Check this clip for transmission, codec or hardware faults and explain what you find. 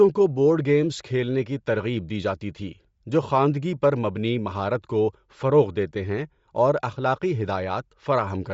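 One codec fault runs through the whole speech clip. The audio stops sharply at 7.6 kHz, and the upper band has a breathy, grainy texture. The likely cause is Bluetooth LC3 compression: at a low rate, fitting roughly 32 kbps with 10 ms frames, the encoder drops much of the upper spectrum and fills it with shaped noise. The damage is plainly audible.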